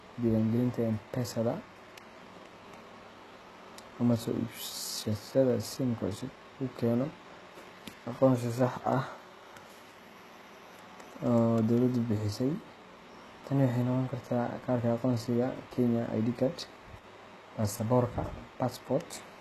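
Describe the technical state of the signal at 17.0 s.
At 17.0 s the speech drops sharply in level for a brief moment, from 16.99 to 17.04 s. This is most likely one channel dropping out of a stereo pair. When the remaining channel is summed to mono, the content shared by both channels falls abruptly by about 6 dB. Anything carried only in the lost channel vanishes. It is heard as a short, sudden dip, about 50 ms long, before the level snaps back.

Underneath that dip, the whole clip carries plainly audible HE-AAC compression damage, likely from encoding at a very low bitrate, around 16 kbps. Only the lower spectrum is truly coded. The treble is rebuilt by copying lower bands upward and shaping them with a coarse envelope. Nothing is present above 12.3 kHz. The synthetic treble does not line up harmonically with the coded part, so s sounds come out gritty and lispy.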